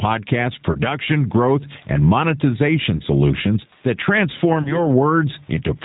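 Throughout, the background swells between phrases and ducks by around 15 dB under each loud syllable, squashing the dynamics. This gain pumping likely comes from input gain set far too high, with a fast limiter pulling it back down.

The speech also sounds rough, slightly synthetic and dull, with nothing above 4 kHz. This is G.729 codec damage: the 8 kbit/s coder rebuilds the speech from a vocal-tract filter, a pitch predictor and a few pulses per frame.

From 0.72 to 0.79 s, just before "growth and", the sound smears and briefly fades. This is VoIP packet loss concealed by the speech codec. About 30 ms of audio went missing, which fits a single lost packet. The decoder extended its last pitch and filter and lowered the gain, and the speech stays weakened for a moment after real audio returns.

The same concealment recurs from 2.96 to 3.01 s, just before "solutions that".

It recurs again from 4.62 to 4.86 s, where the distortion lingers longer after the 30 ms loss.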